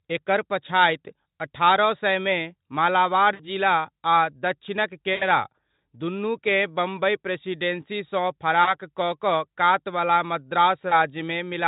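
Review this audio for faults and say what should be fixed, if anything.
VoIP packet loss concealed by the speech codec occurs four times: 3.33–3.47 s (about 60 ms missing), 5.13–5.24 s (80 ms), 8.63–8.76 s (40 ms) and 10.89–10.97 s (20 ms). The losses come in steps consistent with 20 ms Speex frames. While packets were absent, the decoder repeated its last pitch and spectral envelope with falling gain, so the speech smears into a fading buzz or coloured noise and sounds weak for a moment after audio resumes. On a spectrogram, each gap shows frozen bands that dim and blur. On the waveform, the envelope decays smoothly instead of following the syllables. To prevent this, add forward error correction or packet redundancy and use an adaptive jitter buffer with enough depth to ride out network bursts.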